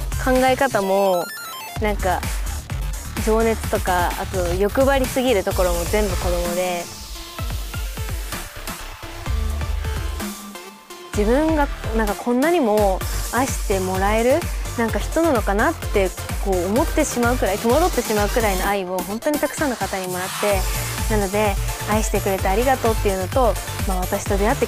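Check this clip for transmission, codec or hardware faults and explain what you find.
No faults detected.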